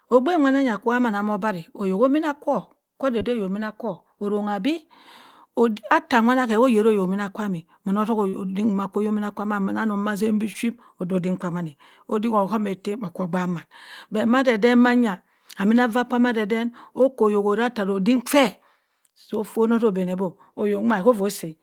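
Short concealed packet loss occurs at 3.19–3.23 s, 8.29–8.35 s and 10.53–10.57 s, where 20, 40 and 20 ms of speech arrived too late to decode. The receiver extrapolated from the preceding signal and crossfaded back, leaving brief smeared or wobbling patches.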